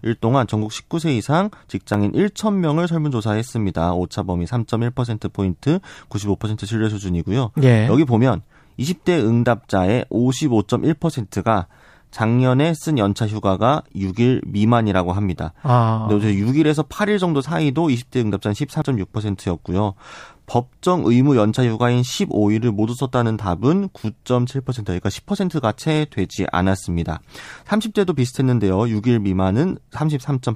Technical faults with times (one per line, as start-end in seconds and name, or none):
1.94 dropped buffer (overrun)
18.82 dropped buffer (overrun)